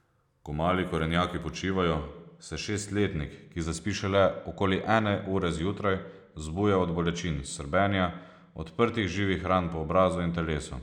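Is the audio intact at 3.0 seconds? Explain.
No. Channel delay (comb filtering) runs from 1.55 s to the end, covering 3.0 s. One channel lags by only a couple of samples, and when summed to mono the shared content cancels at spaced frequencies, first near 10 kHz, dulling the speech's top end.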